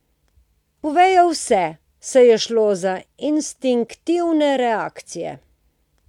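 Listening carefully to the speech recording, nothing stood out as a technical fault at any point.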